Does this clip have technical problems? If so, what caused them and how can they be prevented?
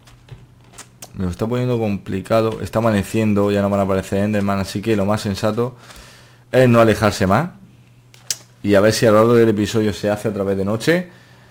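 Yes. Sample clock jitter runs through the whole clip. The converter's clock wanders by roughly 7 µs, so samples land early or late. This adds a hiss about 30 dB below the sound, rougher on loud, bright passages. Prevent it with a clean, stable converter clock.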